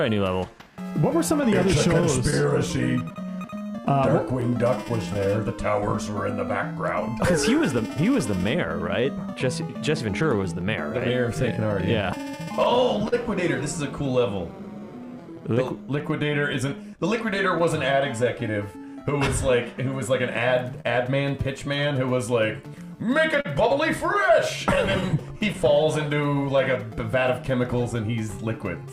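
Clock drift between sender and receiver runs through the whole clip. The sender's clock runs roughly 4% slow, so the receiver's jitter buffer keeps draining and must be topped up.

From 0.14 to 28.83 s, repeated timing corrections replay short slices to stay in step. Playback runs at 98% speed, adding well over half a second, heard as a slightly dragging, unsteady tempo.

Between 1.41 and 20.86 s, scattered short gaps, around thirty of them and each up to about 40 ms, are patched by extending the preceding sound. They produce brief ticks and smears.

From 23.41 to 28.55 s, roughly ten more scattered short gaps of similar length are concealed the same way, giving occasional small hiccups.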